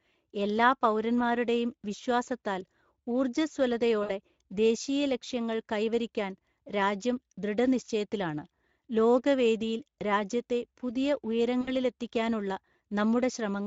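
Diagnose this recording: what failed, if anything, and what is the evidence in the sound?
The codec stage failed: the whole recording runs through Speex, the CELP speech codec, at a bitrate the sound suggests is around 16.8 kbps. Too few bits reach the excitation, so the speech sounds plainly hoarse and noisy throughout.

At the network stage, packets dropped out twice, at 4.03 to 4.11 s, just before "ദേശീയ ലക്ഷ്യങ്ങൾ കൈവരിക്കാൻ രാജ്യം", and at 11.61 to 11.70 s, right after "വേദിയിൽ രാജ്യത്തെ പുതിയ". This is VoIP packet loss concealed by the speech codec. Each gap is about 60 ms, which fits three 20 ms frames. The decoder repeated its last pitch and filter with falling gain, smearing the sound into a fading buzz or coloured noise.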